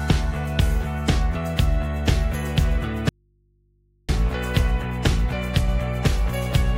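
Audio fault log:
3.09–4.09 s, audio dropout to a faint residue: the sound cuts off abruptly mid-flow and for about one second nothing remains but a low mains hum, far beneath the normal level, roughly 40 dB down, before the signal snaps straight back in. There is no fade at either edge, so it does not read as a pause. The likely cause is a brief loss of the source while the input stayed open and live, picking up hum instead.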